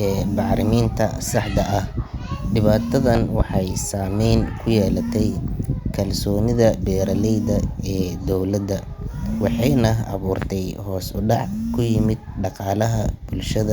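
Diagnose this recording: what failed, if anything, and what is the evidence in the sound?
Loud pop at 3.15 to 3.43 s, a double pop just before "saamayn ku yeelatay", and a single one at 10.42 to 10.45 s before "hoos u dhac ku". Both jump well above the speech, which continues underneath. A voltage pulse in the analogue wiring, likely from a plug or switch, was added to the signal.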